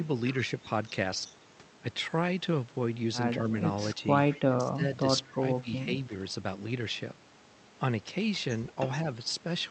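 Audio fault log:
4.33–4.39 s, echo leak: a brief, faint delayed copy of the speech, roughly 25 dB down and trailing by about 198 ms, most likely from loudspeaker pickup that the far end's echo canceller failed to remove.
4.39–4.83 s, 5.26–5.42 s, 5.63–5.69 s, speech suppressed in double talk: the talker dips by up to about 25, 20 and 10 dB, likely because the echo canceller ducked overlapping speech.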